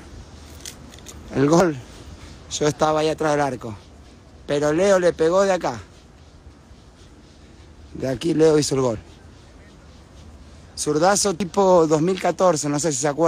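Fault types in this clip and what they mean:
audio missing between chunks: short skips at 1.60, 4.05, 6.50, 8.95 and 11.40 s, each dropping around 50 ms of sound, with the two sides butted together and no silence between them; the even spacing likely comes from 2.5 s chunks losing audio at each handover.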